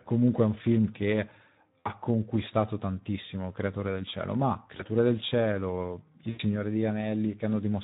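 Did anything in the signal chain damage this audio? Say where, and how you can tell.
Yes. At the codec stage, the whole clip has Speex's hoarse, noisy grain from starved excitation, which fits a low setting around 11 kbps.

On the network side, there is VoIP packet loss concealed by the speech codec at 1.79–1.89 s (between "è un film che" and "conquistato tantissimo"), 4.77–4.89 s and 6.29–6.40 s. The decoder stretches its last frame into a fading buzzy tone or coloured noise, and the voice stays weak or distorted briefly afterwards.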